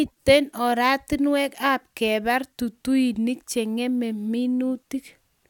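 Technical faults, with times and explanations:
No technical faults can be heard in this speech recording; the signal stays steady and intact the whole way through.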